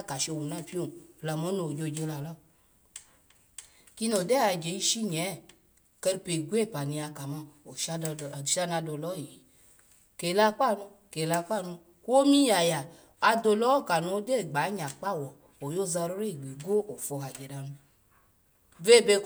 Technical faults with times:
none

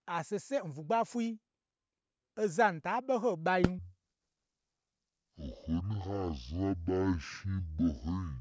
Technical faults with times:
3.79-8.40 wrong sample rate

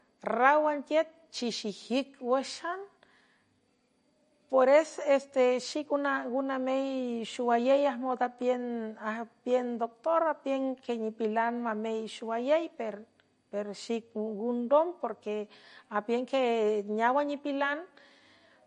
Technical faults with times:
0.00-18.66 MP3 compression

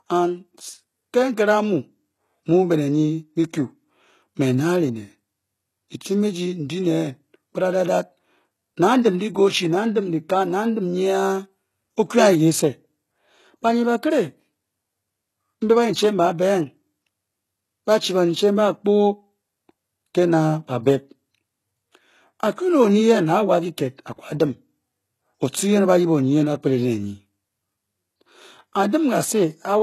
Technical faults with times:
0.00-29.83 HE-AAC compression

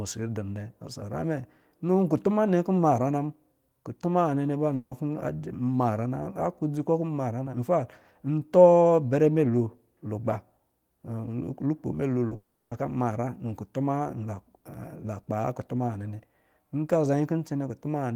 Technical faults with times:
4.75-4.94 long network dropout
12.27-12.34 short concealed packet loss
12.35-12.74 long network dropout

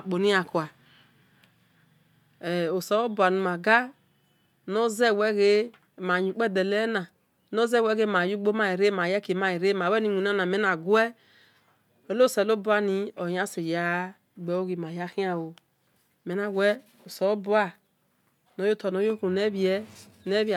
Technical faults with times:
none

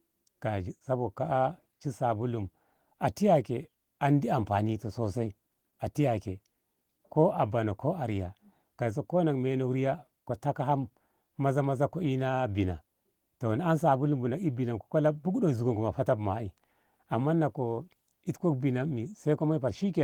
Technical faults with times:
none

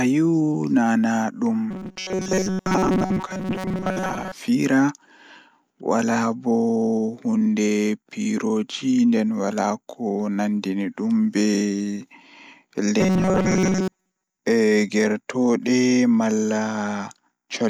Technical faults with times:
1.71-4.32 robotic sound from repeated short buffers
13.01-14.39 robotic sound from repeated short buffers

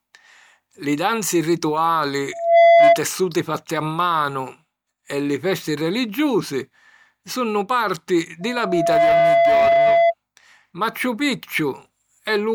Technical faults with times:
2.32-3.01 loudspeaker feedback squeal
8.41-10.14 loudspeaker feedback squeal

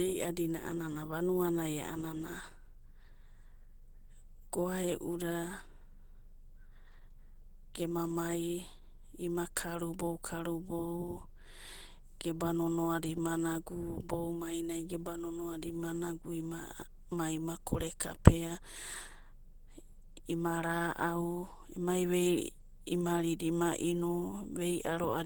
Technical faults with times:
0.00-25.25 Opus compression

